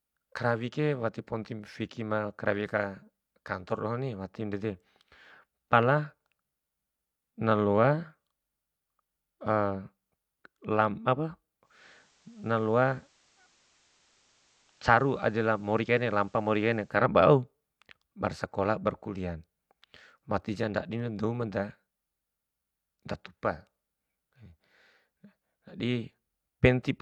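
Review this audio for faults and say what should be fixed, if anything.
From 11.60 to 17.06 s the speech shows digital radio blending to analogue. The receiver lost its digital stream and cross-faded over 308 ms to the station's FM broadcast, then faded back. In that stretch the level drops by about 2 dB, and hiss rises to roughly 35 dB below the signal. On a spectrogram a faint, even noise haze fills the background. On the waveform the envelope steps slightly lower for those five and a half seconds. To prevent this, record from a stronger or more stable digital signal, or set the receiver to digital-only reception so it never blends to FM.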